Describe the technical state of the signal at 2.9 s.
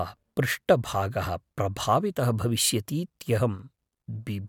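At 2.9 s the speech signal is intact, with no audible fault present at that moment.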